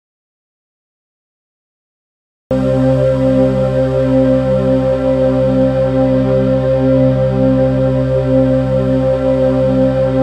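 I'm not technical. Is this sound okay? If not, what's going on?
No. The clip opens in an audio dropout to silence: dead, empty silence until 2.51 s, likely from a disconnected or muted input, so that opening audio is lost.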